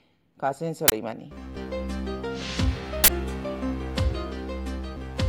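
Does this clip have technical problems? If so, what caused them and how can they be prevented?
Yes, two uninitialised buffer bursts, at 0.88–0.92 s and 3.04–3.08 s, each lasting 40 ms. A block was played before any audio was written into it, so leftover memory came out as loud digital noise. Unlike a dropout's silence or a single click, each fills the whole block. Zero-fill buffers on allocation and never hand a block to playback until it has been written.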